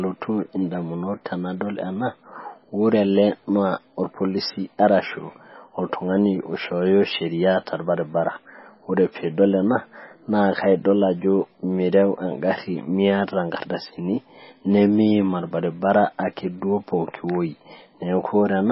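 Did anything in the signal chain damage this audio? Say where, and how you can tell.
Yes, at the codec stage: the speech was likely squeezed through heavy MP3 compression at a very low bitrate, perhaps near 18 kbps. Throughout, nothing survives above 5.6 kHz, and weak spectral lines flicker between frames, leaving a watery, swirling texture with chirpy, smeared s sounds.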